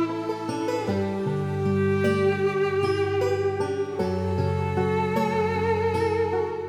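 At 2.32 s the music has a single sharp click. The waveform suddenly jumps to a later value. This is likely dropped samples: a handful of samples lost, a fraction of a millisecond. Nothing audible goes missing, only the tick.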